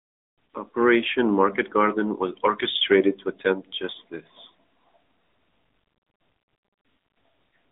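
From start to finish the speech carries the sound of the AMR narrowband mobile codec, and the damage is plainly audible. Everything above about 3.8 kHz is gone and the low end thins below roughly 250 Hz, so the voice sounds boxed into a phone line. Each 20 ms frame is rebuilt from a vocal-tract model and sparse pulses, giving a buzzy, synthetic edge that fits a mid-rate mode near 10.2 kbps. A spectrogram shows a hard ceiling near 3.8 kHz.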